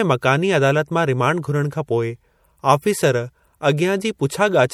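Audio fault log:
Throughout, MP3 compression. The speech has a plainly audible watery, swirly texture. Weak frequency components seem to switch on and off between frames as bits run short, which fits a 64 kbps bitrate. Nothing sounds above 20.9 kHz. The likely cause is MP3 encoding.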